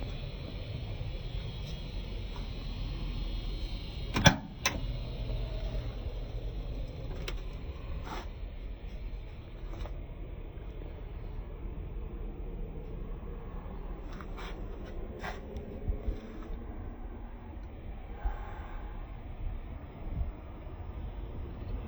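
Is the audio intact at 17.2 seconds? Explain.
No. At 17.2 seconds the audio is still affected by stereo read as mono, which runs through the whole clip. Left and right samples are taken in turn as one channel. The sound plays at half speed, an octave low. A faint mirrored image sits high in the spectrum.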